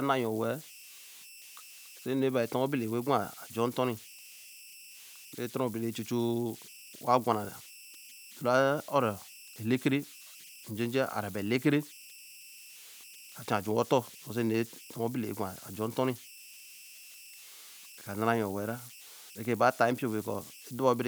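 It's a speech recording with converter idle tones running all the way through. In the pauses you get a whistle sitting somewhere around 3 kHz, and under the quieter stretches of speech there's a grainy, fizzy texture. The error is about 20 dB below the speech. That's a delta-sigma converter working without dither: with tiny input it locks into repeating bit patterns, and those turn into tones.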